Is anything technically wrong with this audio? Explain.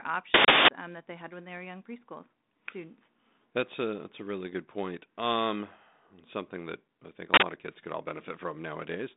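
Yes. There are two uninitialised-buffer bursts: 0.34 to 0.68 s, just before "um that they had", and 7.34 to 7.42 s, between "that I think a" and "of kids could all". Each time a block was played out before any audio was written into it, so stale memory came through as loud, harsh digital noise. The lengths, about 341 ms and 85 ms, fit 16384- and 4096-sample blocks. Unlike a dropout, which leaves silence, or a click, which is a single spike, each event fills a whole block with noise louder than the band-limited G.726 telephone sound around it.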